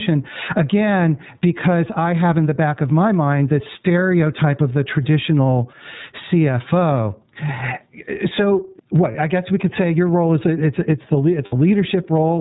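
Speech recorded through a call chain with several faults. The input gain was likely set far too high, so a fast limiter keeps pulling it down, producing gain pumping, with a swing of roughly 20 dB. Throughout, the iLBC codec, whose 30 ms frames fit its 13.33 kbps mode, cuts everything above 4 kHz and leaves the voice plainly rough and synthetic. From 2.21 to 3.87 s, just after "because I", a nearby 2G phone sending GSM signalling bursts is rectified by the audio circuit, giving a galloping dit-dit-dit of short buzzes at about 217 Hz, roughly 30 dB below the speech. Lost iLBC frames make the decoder fill the gaps by repeating the last pitch cycle with noise, heard as a brief held, buzzy vowel: a 30 ms gap at 9.12 to 9.16 s just before "I guess we could", and a 60 ms gap at 11.45 to 11.53 s right after "it's it's the", each recovering almost at once.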